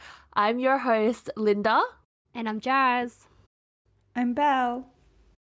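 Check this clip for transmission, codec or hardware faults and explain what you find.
I found no transmission, codec or hardware faults in this clip.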